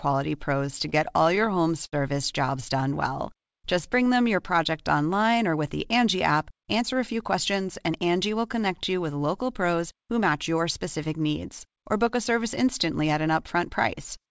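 From 0.66 to 1.94 s, packets arrived late and the jitter buffer kept running dry, producing repeated stalls (stutter). The receiver stretched the last sound through each gap, the longest about 70 ms, so the speech drags and hiccups. From 2.77 to 4.14 s, the jitter buffer was short of reserve, causing a jitter buffer slow-down. The receiver repeated pitch periods, adding 105 ms, so the speech runs at 93% speed with unchanged pitch and sounds drawn out. From 6.15 to 8.01 s, the jitter buffer held too much audio, causing a jitter buffer speed-up. The receiver trimmed about a tenth of a second in small pieces, so the speech runs at 106% speed and sounds hurried. Throughout, the call path passes nothing above 8 kHz, which fits a wideband call codec such as G.722.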